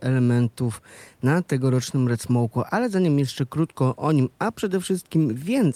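No technical faults are audible.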